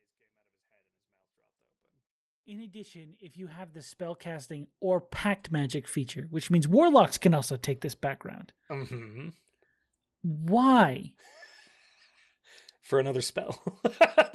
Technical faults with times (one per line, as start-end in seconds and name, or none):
none